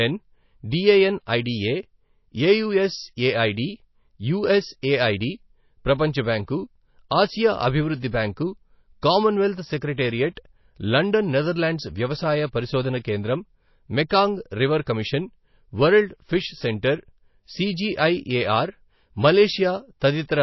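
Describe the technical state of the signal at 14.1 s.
At 14.09 s, a pre-echo of about 13 ms precedes "రివర్ కమిషన్ వరల్డ్ ఫిష్". Quantisation noise spread across the transform block puts a brief hiss ahead of the attack, which softens and smears it. Throughout the speech there is plainly audible damage, likely from MP3 compression at a very low bitrate near 24 kbps: nothing remains above 5.8 kHz, and swirly, watery artefacts come from weak lines dropping in and out.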